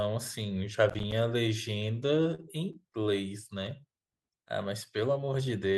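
From 0.90 to 1.12 s, processor overload crackle: several buffers of roughly 10 ms missed their deadlines and dropped out as silence, leaving hard-edged gaps and vertical clicks on a spectrogram.

Between 1.75 and 3.07 s, repeated stalls (stutter): ten late-packet waits, the longest 38 ms, were bridged by extending the last sound, so the speech drags; the waveform shows repeated cycles.

From 3.81 to 4.07 s, a jitter buffer slow-down adds about 35 ms by repeating pitch periods, running at 90% speed. The harmonics keep their spacing but stretch sideways in time.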